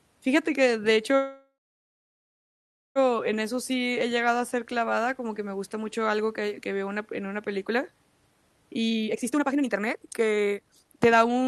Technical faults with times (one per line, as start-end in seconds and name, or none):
1.15-2.98 call audio freeze
8.90-11.48 jitter buffer speed-up